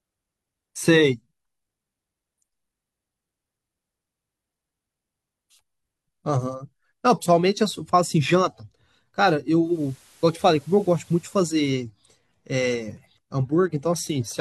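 From 9.60 to 11.64 s, digital radio blends to analogue: a 238 ms cross-fade to FM brings in hiss around 30 dB down and shifts the level about 1 dB. Unlike a dropout, the sound never stops.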